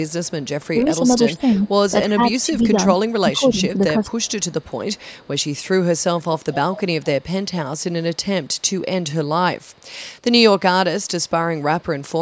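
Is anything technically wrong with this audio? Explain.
Yes. A faint delayed copy of the speech trails behind it at 0.07–1.7 s, 2.4–2.7 s, 4.06–5.53 s, 6.19–9.04 s, 9.59–9.86 s and 11.03–12.02 s, lagging about 315 ms at first and about 390 ms later. This is likely echo leak, where a loudspeaker's echo slipped past the echo canceller and was sent back.

Between 0.83 and 1.48 s and from 2.07 to 4.05 s, the speech dips by roughly 10 dB in patches while the other side talks. This is likely speech suppressed in double talk, with the canceller turning down the near talker along with the echo.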